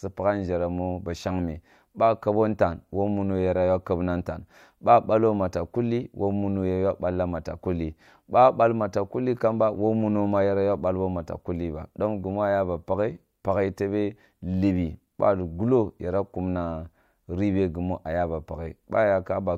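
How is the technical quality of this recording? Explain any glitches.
No glitches or technical faults can be heard anywhere.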